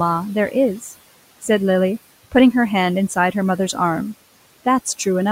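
From start to finish you can hear noise suppressor artifacts at work on this speech. The suppressor is estimating which frequency bands hold steady background noise and pulling those down frame by frame, by about 17 dB here. So the room noise, which sits about 20 dB below the speech, sinks away in the gaps between phrases and then climbs back up underneath whenever someone talks, giving the background a pumping, gated feel.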